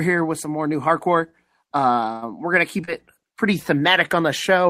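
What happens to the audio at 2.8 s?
Right after "we're going to", there's short concealed packet loss: two back-to-back 20 ms gaps from 2.81 to 2.89 s. The receiver papers over each by stretching the last bit of sound and blending back, so you get a brief smear just before "it pretty".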